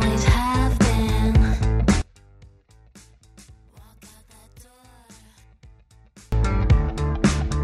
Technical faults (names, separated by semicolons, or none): one channel inverted